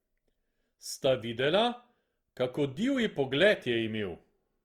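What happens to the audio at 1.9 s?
At 1.9 s you're hearing the Opus compression that runs through the whole clip. The speech sounds rough and grainy, with a noisy texture where bands short of bits were patched with folded or noise-like content, which fits a low bitrate around 24 kbps, likely in Opus's music mode.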